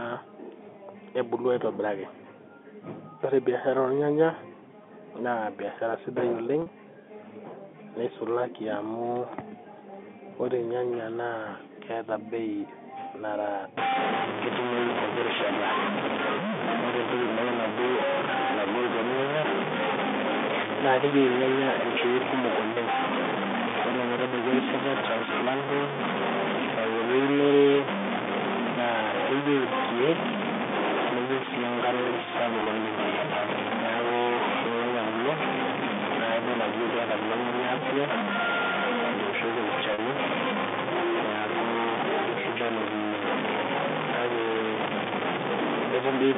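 At 6.62 s the sound catches for 40 ms. This is packet loss with pitch repetition. Audio went missing, and the receiver filled the hole by replaying the last pitch cycle. The gap fits two lost 20 ms packets. It is too short to fade out, so it comes across as a brief held, buzzy tone.

From 13.78 s to the end, the sound turns harsh and grainy. The error is about as loud as the signal. It rises and falls with the level, and quiet passages sputter or drop out. This is most likely low bit depth without dither. Samples truncated to about 3 bits would produce exactly this grit. Beneath it, the telephone band from 200 Hz to 3.6 kHz is still audible.

Packet loss returns at 32.64 s as a 20 ms buzzy hold, one packet's worth. It returns again at 39.94 s as a 40 ms hold.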